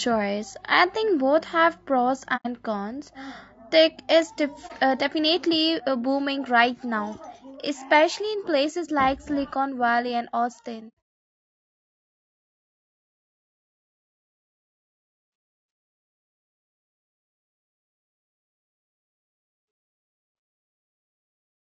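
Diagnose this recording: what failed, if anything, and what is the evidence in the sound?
The codec stage shows plainly audible damage throughout the speech. The voice sounds rough and grainy, with noise filling the gaps between harmonics. Short transform frames resolve pitch poorly, which points to low-delay AAC compression, likely AAC-ELD at a bitrate around 32 kbps. A spectrogram would show blurred harmonic lines with hash between them.

AAC frame loss with muting sits in the network-to-decoder path. Soft-edged dropouts occur at 2.36 to 2.47 s, losing about 90 ms, and at 4.67 to 4.71 s, losing about 30 ms. From 10.88 s, about 240 ms goes missing, scattered over roughly 420 ms, with the longest gap around a tenth of a second. The decoder zeroes each lost frame's spectrum, and the overlapping windows taper the audio out and back in. On the waveform these appear as rounded gaps, with the single lost frame only a brief dip.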